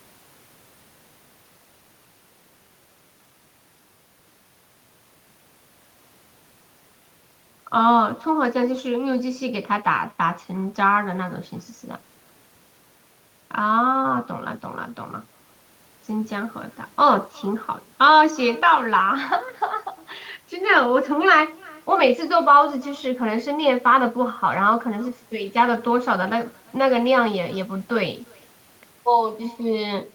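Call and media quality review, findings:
Faint, thin copy trailing the speech by roughly a third of a second, throughout. Echo with no canceller: far-end loudspeaker pickup returning uncancelled, about 28 dB down.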